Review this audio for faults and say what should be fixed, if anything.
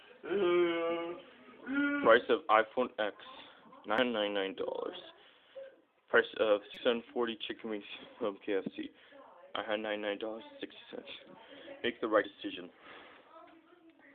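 Damaged data in a compressed stream glitches the audio at 3.98 s, from 6.74 to 6.77 s, and at 12.24 s. Corrupted bytes there make the decoder misread frames and lose sync until it finds the next header. Re-fetch or re-encode from an intact source, and verify transfers with checksums.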